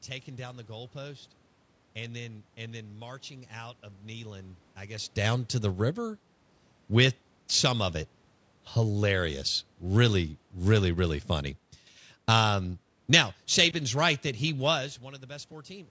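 No technical faults: the level shifts around 5 s and again shortly before 15 s as the talker moves relative to the microphone, room noise sits underneath the speech, and nothing above 8 kHz comes through, as expected from normal call microphone processing.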